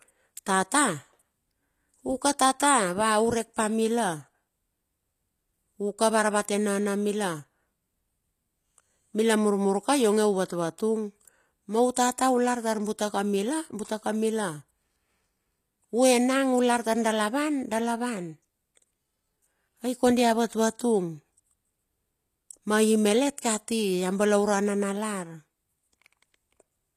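Across the whole clip the speech has plainly audible codec damage: the upper range sounds synthetic rather than natural, and nothing at all is present above about 14.9 kHz. The likely cause is HE-AAC compression, which codes only the lower spectrum and fills in the treble by copying lower bands upward under a coarse envelope, so the high harmonics no longer match the ones below. The amount of damage fits a bitrate around 24 kbps.

From 11.94 to 11.96 s, a brief hiss runs ahead of a sharp attack for about 20 ms, making that onset sound smeared. This is pre-echo: the transform codec spreads quantisation noise evenly across its block, so noise scaled for the loud attack also leaks into the quiet moment just before it.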